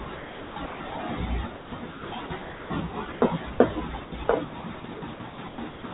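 Sound chopped by the voice detector occurs from 0.04 to 0.92 s, 1.56 to 2.7 s, 4.04 to 4.28 s, and from 4.6 s to the end. The detector likely gated repeatedly, swapping quiet syllables and word edges for comfort noise (about 580 ms, 680 ms and 120 ms respectively in the first three), so speech sounds choppy. Sound dropped by the voice detector occurs at 3.12 to 3.22 s and 3.52 to 3.6 s, where the detector likely misread quiet speech as background and stopped sending, leaving 100 ms and 80 ms of steady comfort noise before speech resumes. Throughout, the band-limited call audio stops at 4 kHz, consistent with G.711.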